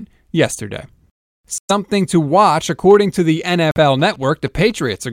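Bluetooth stalls at 1.58 to 1.71 s and 3.71 to 3.77 s cut the speech to silence for 112 ms, just before "to watch according to", and 48 ms, just after "watch according to the". The likely cause is interference delaying packets until the headphone buffer ran empty.

GSM signalling bursts run from 3.99 to 4.95 s: a nearby 2G phone signalling to its network radiates short groups of bursts, which the audio circuitry rectifies into a galloping dit-dit-dit of ticks and 217 Hz buzz, sitting roughly 25 dB under the speech.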